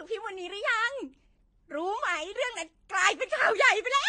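A short speech clip with a lossy-codec character from start to finish. Nothing is present above 9.5 kHz, so the top of the sound is dull and airless. The artefacts of two codecs are heard together. This is likely transcoding between lossy codecs. The sound points to a low-rate AAC encode, around 32 kbit/s, later re-encoded to Vorbis at a similar rate. The second encoder spent its bits on the first one's damage and added its own.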